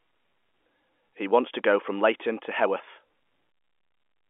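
No technical faults can be heard in the speech; it carries the narrow telephone sound of G.711 coding, with the band held to roughly 250 Hz to 3.4 kHz and a bandwidth that fits an ordinary 64 kbps A-law line.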